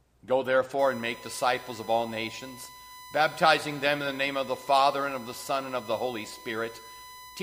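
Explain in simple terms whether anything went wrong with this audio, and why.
Something did go wrong. From about 0.79 s right through to the end, there's a steady, high whine sitting under the sound at 1 kHz. That's USB whine. A USB connection pulls power in quick bursts, a thousand times a second, and that rhythm leaks into the audio through the power or ground wiring. It shows up as a fixed-pitch tone, and here it's loud enough to hear clearly rather than just faintly in the background.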